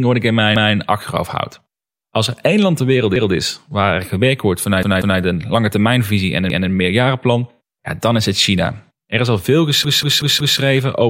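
New audio repeatedly failed to arrive in time, so the device replayed its last buffer, a repeated buffer fault. Each repeat is a 186 ms chunk, which fits an 8192-sample buffer. It sounds as a stuttering echo of the same speech with a hard join and nothing skipped: at 0.56–0.74 s between "wat ik in" and "achterhoofd houd", at 3.16–3.34 s, twice at 4.83–5.20 s after "waar er gewerkt wordt", at 6.50–6.69 s, and four times at 9.85–10.59 s after "is al veel".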